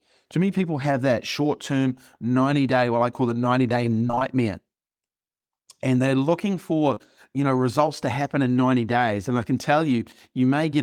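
Repeated packet loss (robotic sound) from 4.07 to 4.22 s: four gaps, none longer than 21 ms, left about half that stretch patched from earlier sound, making it choppy and robotic.

Short concealed packet loss at 6.94 to 6.98 s and 6.98 to 7.02 s, just after "they're looking" and before "you know results to": each hole was filled by extending the preceding sound, heard as a brief smear.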